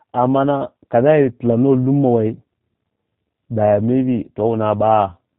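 From start to finish, the speech carries plainly audible G.729 codec damage. Nothing is heard above 4 kHz, and vowels take on a rough, buzzy, synthetic edge, because the coder rebuilds each frame from a filter, pitch predictor and sparse pulses, consistent with an 8 kbit/s G.729A stream.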